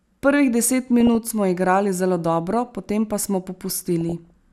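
At 1.00 to 1.15 s, and again from 3.64 to 4.30 s, the speech picks up DAB burbling. Weak reception lets bit errors, roughly a third of a percent here, slip past the error correction into the MP2 data, so corrupted samples put short blips of noise in single sub-bands and wrong scale factors make individual sub-bands leap in level for up to a frame. The second, longer patch spans 29 frames.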